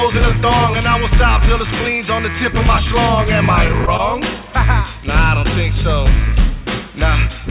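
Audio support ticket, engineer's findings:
Choppy, robotic patch at 3.68–4.01 s: five short holes, longest 18 ms, each smoothed over by repeating the preceding sound, about 65 ms concealed, roughly a fifth of the stretch. Repeated packet loss (robotic sound) in the jitter buffer/concealment stage. Audio is band-limited with nothing above 4 kHz, which fits a G.711 A-law call path at 64 kbps.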